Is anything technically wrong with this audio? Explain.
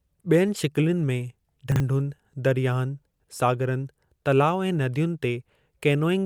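Yes. Chunks out of order occur twice in this speech, at 1.72–1.80 s and at 3.20–3.28 s, just before "सागरनि तलाउ ऐं". Each time a 40 ms piece of audio lands one chunk late, swapping places with its neighbour, so nothing goes missing but three hard joins produce a brief jumbled stutter.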